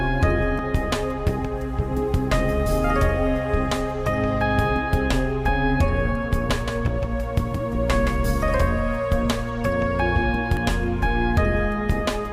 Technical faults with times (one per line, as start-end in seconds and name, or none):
0.59-0.62 overlap between stream segments
6.49-8.25 doubled audio track
10.57 overlap between stream segments